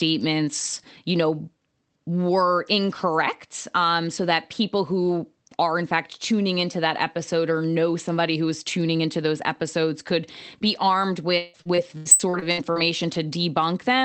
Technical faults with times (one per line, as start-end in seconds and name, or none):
11.29-12.78 repeated packet loss (robotic sound)